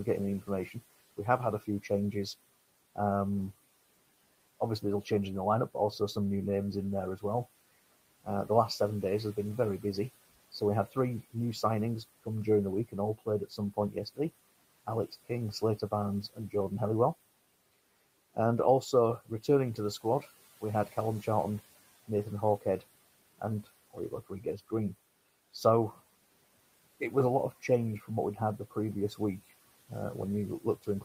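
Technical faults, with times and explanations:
0.43–2.97 s, 4.82–16.54 s and 18.35–31.05 s: speech cut by the noise suppressor. The suppressor mistook parts of the speech for the room noise, about 22 dB down, and turned them down with it. Starting just after "getting the", quiet consonants and word endings dip by up to about 10, 18 and 15 dB and sound swallowed. In the first two spans only brief moments are hit: about a tenth of a second in the first span and under a second in the second.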